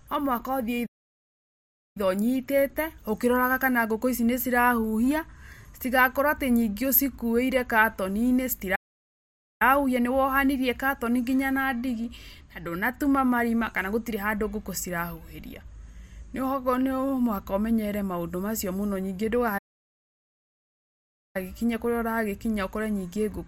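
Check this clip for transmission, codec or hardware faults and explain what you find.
Three playback stalls interrupt this speech. The first runs from 0.86 to 1.97 s, about 1.09 s. The second runs from 8.75 to 9.62 s, about 0.85 s, and ends just before "nĩwohanirie katoni nginya na". The third, the longest, runs from 19.58 to 21.36 s, about 1.77 s. Each time the speech halts mid-flow into silence, then resumes. The likely cause is a player starved of data or a blocked playback thread.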